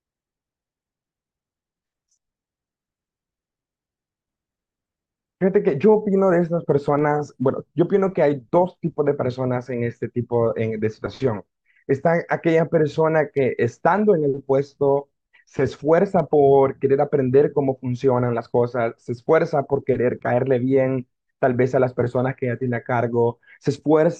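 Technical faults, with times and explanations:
16.32 s, damaged data in a compressed stream: a brief glitch cuts across the speech, lasting roughly 12 ms. A short stretch of the compressed data arrived corrupted, so the decoder could not read the frames there correctly. It lost its place in the stream and had to hunt forward for the next valid frame header before playback could resume, and that misread, resynchronising moment is what produces the sudden blip.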